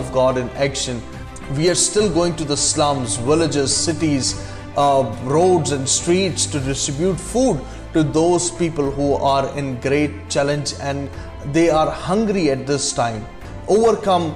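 No dropouts, glitches or other technical faults turn up anywhere in this recording, so there's nothing to flag here.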